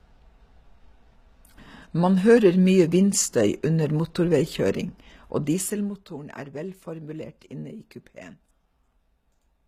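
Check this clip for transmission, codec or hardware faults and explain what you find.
One codec fault runs through the whole speech recording. From start to finish there is plainly audible HE-AAC compression, likely at a low bitrate around 20 kbps. Only the lower band is coded. The treble is regenerated by copying lower bands upward and shaping them with a coarse envelope, so its harmonics do not align with those below the crossover. Unlike a plain low-bitrate codec, which would cut the top off much lower, this audio keeps treble up to 14.9 kHz, but that treble is synthetic.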